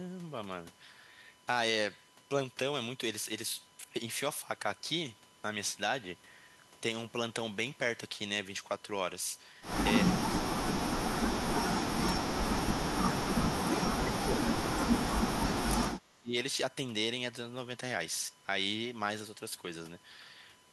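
A USB whine runs through the whole clip: a fixed 1 kHz tone about 30 dB below the speech, from 1 ms bus frames leaking through power or ground. It shows as a steady horizontal line on a spectrogram.

The speech is suppressed in double talk from 10.04 to 12.54 s, 13.37 to 15.67 s and 16.09 to 16.35 s. It dips by roughly 30 to 35 dB, likely because an echo canceller ducked it. On the waveform the envelope collapses.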